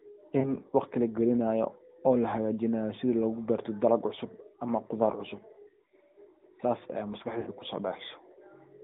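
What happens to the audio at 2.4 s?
At 2.4 s, as everywhere in the clip, the speech carries AMR narrowband mobile codec damage. The coder samples at 8 kHz and rebuilds the voice from a vocal-tract model driven by sparse pulses, so the tone sounds buzzy and synthetic, in line with a mid-rate mode near 10 kbps. A spectrogram shows a hard band from about 150 Hz to 3.6 kHz with nothing above.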